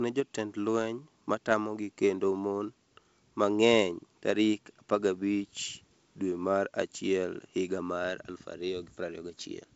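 Nothing goes wrong anywhere in this speech, which comes through a G.722 wideband telephone link at 64 kbit/s with its top end stopping around 7.7 kHz, just as that kind of line normally sounds.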